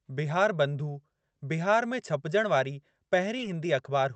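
A brief smear near 3.37 s in this speech clip, lasting about 0.03 s, is short concealed packet loss: roughly 20 ms of audio arrived too late for the decoder, so the receiver extended the preceding sound and blended back into the real signal. The call path limits the audio to an 8 kHz band, with the coding texture expected from an Opus stream at around 40 kbps.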